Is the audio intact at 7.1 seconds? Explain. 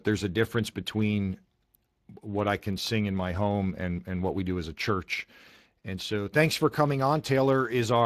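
No, Speex codec damage runs through the whole clip, including 7.1 s: starved CELP excitation, fitting a rate near 22 kbps, leaves the speech plainly hoarse and noisy, with nothing above 15.3 kHz.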